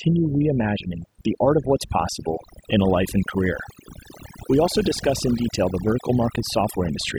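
Overdone noise removal runs through the whole clip: a noise reduction process set far too strong pulls individual frequency bands down whenever they sit near its noise estimate, taking quieter speech detail with them. The gaps become near-silent with twinkling specks.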